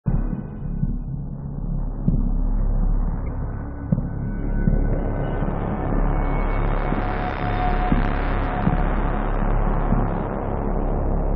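The audio was most likely decoded from an MP3 stream with missing frames, giving a broken MP3 bit reservoir fault. After the gap, the next frame reached back into the reservoir for its borrowed bits and found another frame's data. From 3.25 to 3.28 s the audio skips forward and the sound right after the cut comes out damaged. That lasts about 30 ms, a little over one 26.1 ms frame.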